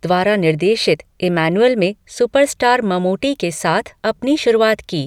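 Speech recording, no technical faults detected.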